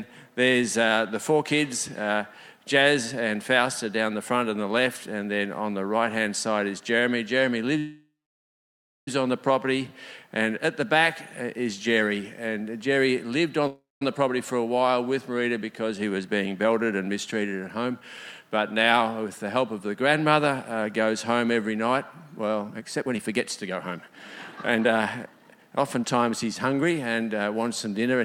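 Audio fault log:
7.78–9.08 s and 13.67–14.02 s, call audio freeze: the sound stretches into a fading buzz, then goes quiet for roughly 0.97 s and 0.19 s before resuming where it left off. Likely the packets stalled and the jitter buffer ran dry, so this adds delay rather than losing anything.
16.02–19.86 s and 22.68–27.22 s, jitter buffer speed-up: the audio rushes at the same pitch, at 108% and then 128% speed. The receiver is trimming tiny pitch-period slices to drain the backlog, around 0.3 s in the first stretch and about 1.5 s in the second.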